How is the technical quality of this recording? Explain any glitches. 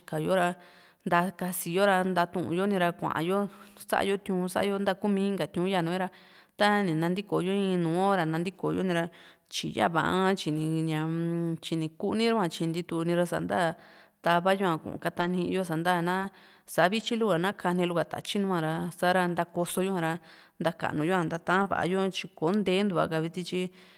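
The speech has packet-loss damage from about 10.5 s onward. The losses are brief and sound like momentary roughness or smearing rather than dropouts.

Lost packet rebuilt from error correction occurs at 10.53–10.59 s, 15.19–15.29 s, 16.21–16.23 s, 16.99–17.05 s, 19.77–19.79 s and 21.65–21.67 s. Each lasts 20 to 60 ms, which fits one to three 20 ms packets. The decoder played the low-bitrate backup copy carried in the following packet, so nothing goes silent, but those stretches sound coarser and noisier than the surrounding speech.

Short concealed packet loss occurs at 16.19–16.23 s and 21.63–21.67 s. Each is about 20 ms of missing audio that the receiver covered by extending the preceding sound, either pitch-continued or noise-shaped, before crossfading back. Both overlap the rebuilt packets just listed. The result is a short smear or wobble at each point, and a brief consonant there can lose definition.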